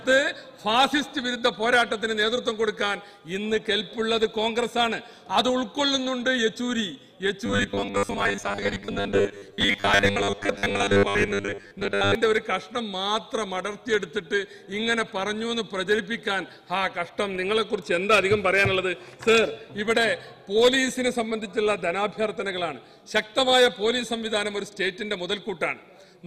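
From 7.46 to 12.15 s the audio turns into a rigid, metallic robotic buzz near 100 Hz. The sound still follows its rough shape. This is likely robotic sound from repeated short buffers: about half the time, a 10 ms slice is replayed while real audio is skipped.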